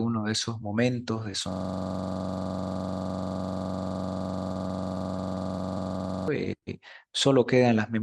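System hang loop from 1.52 to 6.28 s in this speech clip: a 42.67 ms slice of audio repeats over a hundred times, giving a steady 23.4 Hz buzz, which fits a 2048-sample ring buffer replayed while the system froze. Scattered short gaps from 4.53 to 5.81 s, about seven tiny holes, the longest around 10 ms, were patched by extending the preceding sound, leaving brief ticks and smears. A short stall from a late packet at 6.58 to 6.64 s holds the sound for 41 ms while the empty jitter buffer waited, then resumes with nothing lost.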